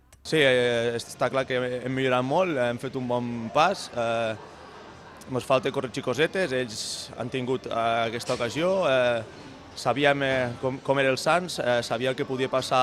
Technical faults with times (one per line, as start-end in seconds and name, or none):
none